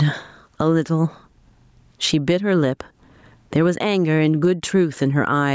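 Gain pumping runs through the whole speech clip. The level swings by roughly 15 dB between the gaps and the loud syllables. Loud and quiet passages sit close together, so the sound is flat and squashed. The likely cause is input gain set far too high, with a fast limiter or compressor clamping down on every peak. The call-style band limit, with nothing above 8 kHz, is part of the call's microphone processing and is not a fault.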